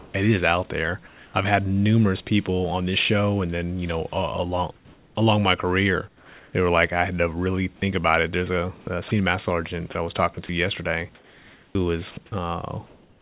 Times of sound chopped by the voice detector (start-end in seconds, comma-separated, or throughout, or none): 8.81-9.11, 9.92-13.21